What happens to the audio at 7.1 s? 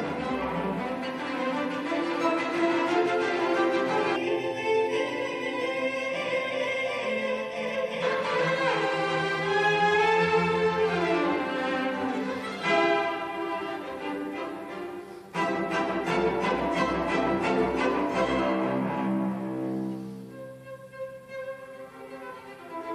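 Channel delay (comb filtering) is present at 7.1 s. It runs from about 4.16 s to 8.02 s. One channel of the source lags the other by roughly 0.4 ms, and when the two are folded to mono, the shared content cancels at evenly spaced frequencies, with the first notch around 1.5 kHz. Across that stretch the sound takes on a hollow, phasey colour set by those fixed notches.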